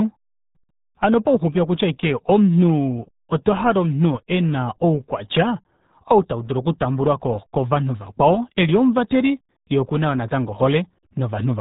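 From start to finish the speech has passed through the RealAudio 14.4 codec, an early dial-up speech coder whose heavy data reduction fits an 8 kbit/s stream. To squeeze the signal that far, the codec discards the whole upper band and models what remains coarsely. Nothing above about 3.8 kHz survives, so the voice sounds boxed-in and muffled, and the crude modelling leaves a gargling, underwater quality smeared across every syllable.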